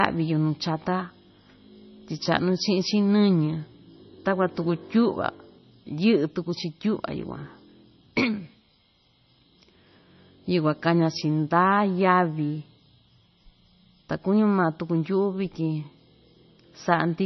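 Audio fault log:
Throughout, MP3 compression: the speech is heavily damaged, sounding watery or swirly, with metallic chirps on s sounds, smeared attacks, and nothing above 6 kHz. The likely cause is an MP3 encode starved of bits, which fits a low bitrate of around 25 kbps. The encoder discards weak frequency lines that flicker in and out between frames, and it removes the entire top end above the 6 kHz cut-off.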